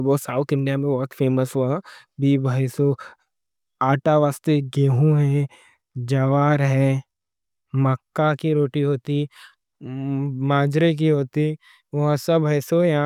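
Listening to the speech recording, nothing technical stood out as a problem.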